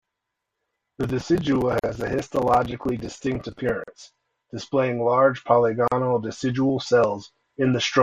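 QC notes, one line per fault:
1.79, 3.84 and 5.88 s: gap at a join of encoded pieces. 40 to 44 ms gaps with smeared edges recur every 2 s, leaving encoder start delay and last-frame padding between pieces.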